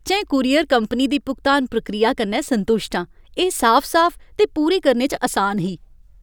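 Speech, with no audible faults.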